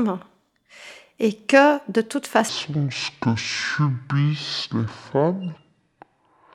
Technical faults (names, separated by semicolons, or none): section at the wrong speed